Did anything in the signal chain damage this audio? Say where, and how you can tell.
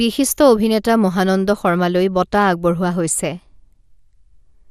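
Yes, at the codec stage: the speech is dull and granular throughout, empty above 15.1 kHz, with a gurgling flicker a plain low-pass lacks, likely MP2 compression starving its upper sub-bands.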